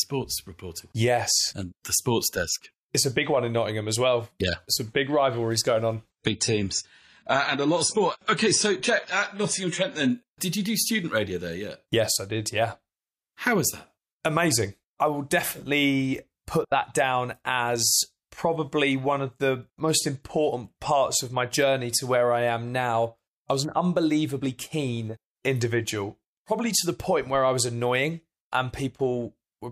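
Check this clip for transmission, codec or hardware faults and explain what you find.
One fault is present: an adaptive stream at a lower bitrate, from 6.1 s to 10.1 s. For those four seconds the player switched to a much leaner encoding of the same speech when the connection slowed, then stepped back up. The change points to AAC at around 96 kbit/s dropping to roughly 24 kbit/s. Everything above 10 kHz vanishes, so the speech turns dull, with more codec artefacts. Quality shifts abruptly at both edges, without any gap.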